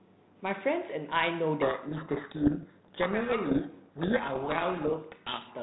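From 1.62 s to 5.52 s the speech is buried under harsh, grinding distortion that swamps it almost completely, then clears just before the clip ends. This is a codec payload misread. The G.726 code words are being packed with their bits in one order and unpacked in the opposite order, so every difference value the decoder rebuilds is wrong. Its adaptive prediction keeps drifting on bad input. Before 1.62 s the band-limited telephone sound with faint light coding noise fits G.726 at about 32 kbit/s.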